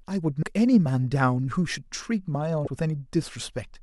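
A speech recording with two brief glitches, from 0.39 to 0.43 s and from 2.64 to 2.67 s, each lasting about 30 ms. Both come from damaged data in a compressed stream: corrupted bytes make the decoder misread those frames and lose sync until it finds the next valid frame header.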